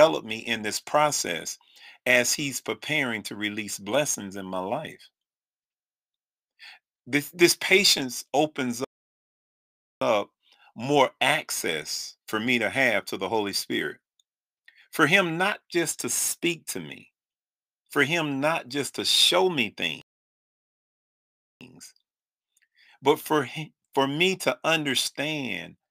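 A speech recording with two problems. Throughout, there's a fine hiss and roughness that rides on the voice, getting grittier on loud and bright sounds like sibilants and dropping away in the pauses. That's sample clock jitter: the converter's clock wobbles by a few microseconds, so each sample lands slightly off time, and the error scales with how steeply the waveform is moving. Here it sits roughly 25 dB below the signal. Then there are two hard dropouts where everything goes silent mid-flow: from 8.85 to 10.01 s, about 1.2 s, and from 20.02 to 21.61 s, about 1.6 s. Both are playback stalls. The sound simply halts and picks up again afterwards, which likely means the player ran dry of buffered data or its audio thread got blocked until it could catch up.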